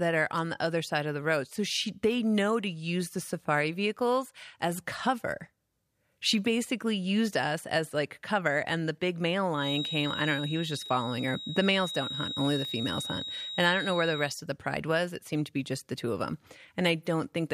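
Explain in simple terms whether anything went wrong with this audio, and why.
A feedback whistle runs from 9.5 to 14.4 seconds, after "and the big male" until "of the pride was". It's a thin, steady 3.8 kHz tone. The likely cause is a loudspeaker leaking back into the microphone.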